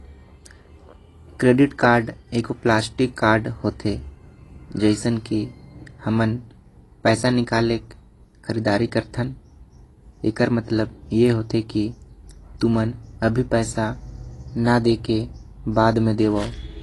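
Speech runs through the whole clip with plainly audible codec damage, most likely from AAC compression. Nothing reaches above about 11.5 kHz, so the top octave is gone and the sound is dull. The encoder is quantising each frame's spectrum coarsely against a hearing model, leaving gaps that smear detail and give sibilants a fizzy, warbling edge. The degree of damage fits a low bitrate of roughly 32 kbps.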